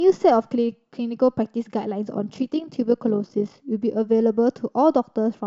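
From 2.14 s to 3.60 s the speech takes on a rapid, buzzy flutter, a rough robotic tremolo in which the level pumps up and down by about 6 dB at a rate of around 50 times a second. This is overlap-add ripple. The audio was split into windowed frames and reassembled with an overlap whose windows do not add up to a steady gain, so the loudness swells and dips once per frame.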